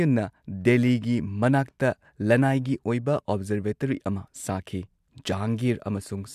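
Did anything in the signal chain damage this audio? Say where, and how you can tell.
No, nothing along the signal chain has left an audible mark on this speech recording, and its level, continuity and timing hold steady throughout.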